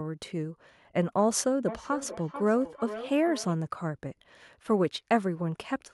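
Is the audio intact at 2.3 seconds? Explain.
No. From 1.68 to 3.59 s there is a feedback echo between two devices: a second device in the same room is playing the call back out, and the first microphone picks it up again, where its echo canceller cannot remove it because it only cancels its own playback. At 2.3 s each bit of speech returns roughly 0.4 s later, thinner and ringing, with the echo peaking at about 12 dB below the speech.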